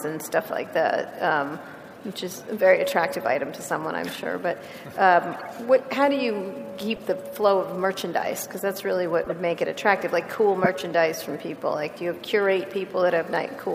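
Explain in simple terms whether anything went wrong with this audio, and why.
Brief chirps and bursts of noise interrupt the sound at 5.32 to 5.46 s, 6.90 to 7.01 s, 9.24 to 9.31 s and 10.64 to 10.67 s, the last being the loudest. These are corrupt frames decoded: small chunks of compressed audio were damaged, but the player played them anyway, producing stray noise.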